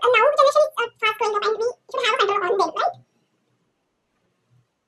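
From start to finish the speech runs at twice normal speed and an octave high. This is audio read two samples at a time: each pair of samples was taken as one frame, halving the duration and folding high frequencies back down.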